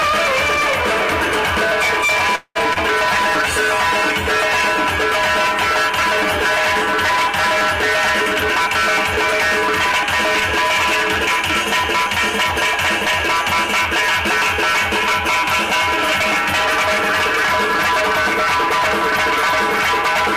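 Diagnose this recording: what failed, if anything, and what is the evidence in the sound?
Network, call audio freeze: at 2.35 s the sound stalls for about 0.2 s, the last sound carried on and fading, with about 0.05 s of silence, then resumes where it stopped. This likely reflects delayed packets draining the jitter buffer; nothing is lost, but the audio now lags about 0.2 s.

Network, short concealed packet loss: at 2.73 s, a brief smear lasting about 0.04 s. Around 20 ms of audio never reached the decoder, and the receiver bridged the hole by extending the preceding sound before blending back into the real signal.

Codec, call bitrate drop: from 3.02 s to 6.62 s the encoder falls from 96 kbps to 19 kbps, holding the lowest rate for about 3.5 s. Coarser Opus coding at that rate roughens the sound and trims high frequencies until the rate recovers.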